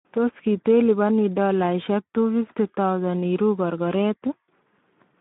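From start to finish the speech sounds hoarse and grainy. It is boxed into a narrow telephone-like band of roughly 150 Hz to 3.6 kHz, with nothing at all above 3.8 kHz. This is plainly audible Speex codec damage. The CELP coder has too few bits to model the excitation properly, which fits a low setting around 11 kbps, so the fine structure of the speech is replaced by coarse, noisy approximations.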